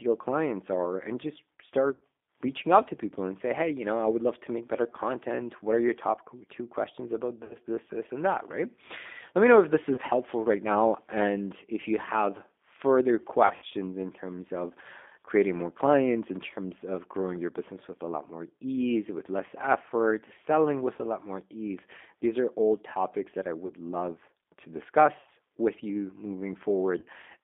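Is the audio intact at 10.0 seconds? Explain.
No. From 9.95 to 10.00 s, just after "me know if this" and before "helpful right now and", there is VoIP packet loss concealed by the speech codec. About 30 ms of audio went missing, which fits a single lost packet. The decoder filled the gap by extending its last pitch and filter settings at falling gain, so the sound smears briefly into a fading buzzy tone or coloured noise.

That moment also carries the G.729 codec damage present throughout, which is plainly audible. The codec rebuilds the sound from a vocal tract model and sparse pulses at 8 kbit/s. Only about 250 Hz to 3.6 kHz survives, so the sound is thin, slightly rough and synthetic.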